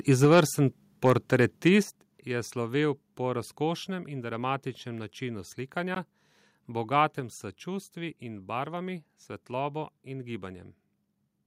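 Microphone overload first appears from 0.23 to 0.41 s. The peaks run about 5 dB past the converter's limit, and a noticeable share of the waveform is flattened, so those syllables take on a harsh, crackly edge. The likely cause is an input level set too high for the converter.

A microphone volume step-down lands at 0.25 s, inside that distorted stretch. Voice and background both drop abruptly by about 4 dB, most likely because the call software reacted to the clipping by cutting the device's input gain.

Microphone overload returns from 1.06 to 1.36 s, about 3 dB over, and again from 1.67 to 1.75 s, about 1 dB over. Both bursts clip more lightly, leaving a harsh, crackly edge on the loudest syllables.

A second microphone volume step-down at 1.83 s cuts the level by about 7 dB in one go. The whole sound, background included, suddenly sits noticeably quieter. This again looks like a likely automatic gain correction following the preceding peaks.

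A Bluetooth dropout at 5.95 s punches a 15 ms silent hole. The sound resumes further along, as though it had kept playing through the gap. This points to a single lost audio packet, likely one that failed to reach the headphones in time.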